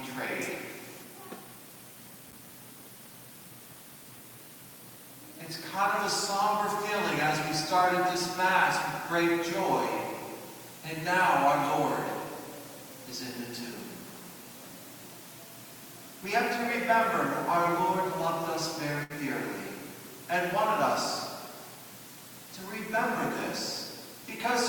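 A worn or dirty contact making and breaking at a loose connector chops the signal from 2.23 to 2.49 s, and any DC on the line turns each break into a pop. The result is a quarter-second burst of irregular crackle and scratching over the sound.

At 19.03 s a burst of packet loss leaves the receiver without data, so it stretches the last sound it had for about 63 ms, fading it as a held buzz or hiss. The audio picks up at 19.13 s with about 60 ms of material gone.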